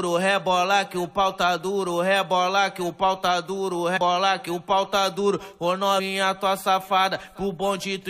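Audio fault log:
3.96 s and 5.98 s, compressed frames skipped: the sound jumps ahead, roughly 150 ms then 100 ms lost, consistent with whole 23.2 ms frames going undecoded.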